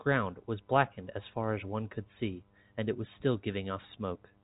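No technical faults can be heard anywhere in this speech recording. It carries the narrow band of G.711 telephone coding, with nothing above about 3.8 kHz and at most a faint coding hiss riding under the voice.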